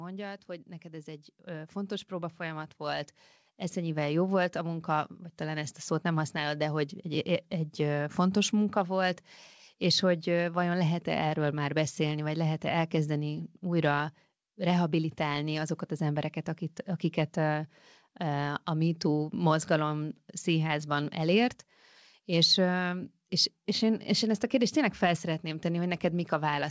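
From 0.46 s to 7.81 s, the level climbs steadily by about 13 dB. This is automatic gain rising. The gain control judged the input too quiet and kept turning it up over those seven seconds. Speech and background noise swell together, so the room grows louder along with the talker. The rise settles just before "fontos munka volt és". Through the call path, the sound carries nothing above 8 kHz, which fits a G.722 codec.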